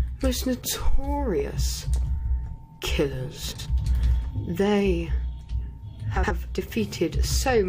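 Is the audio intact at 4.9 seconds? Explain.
Yes, at 4.9 seconds the audio is intact, with no dropout, distortion or other fault at that point.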